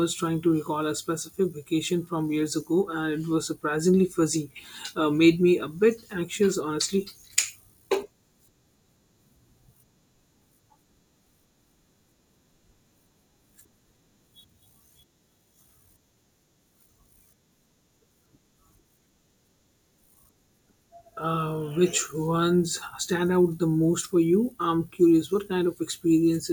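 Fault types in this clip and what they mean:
Dropped samples: a single sharp click at 6.53 s in the speech, likely from a handful of samples going missing so the waveform leaps ahead. The gap is far under a millisecond and removes no audible sound, unlike a dropout, which leaves a hearable silence.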